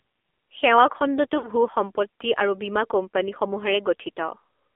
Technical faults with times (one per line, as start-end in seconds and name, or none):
0.00-4.75 AMR narrowband mobile codec
1.38-1.48 lost AMR speech frames